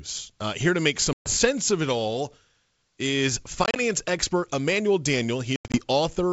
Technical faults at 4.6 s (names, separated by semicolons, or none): none